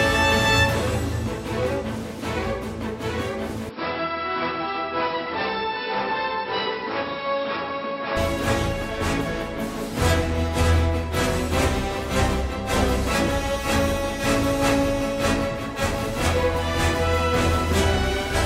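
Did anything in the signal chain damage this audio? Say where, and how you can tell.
Yes. From 3.69 s to 8.17 s the sound turns dull, with nothing above 5.5 kHz, drops by roughly 5 dB, and carries a new background noise sitting about 30 dB below the signal. There is no gap at either switch. The likely cause is an input switched to a poorer device at the driver or device-selection stage. A codec stepping down its bandwidth would narrow the band without bringing its own noise floor and a new level.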